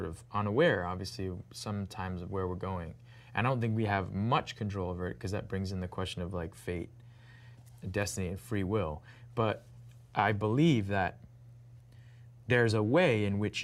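Nothing goes wrong anywhere in this audio; it just runs along without a single technical hiccup to point to.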